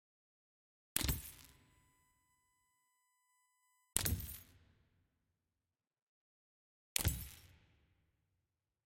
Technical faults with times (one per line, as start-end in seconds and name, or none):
1.33-3.93 USB whine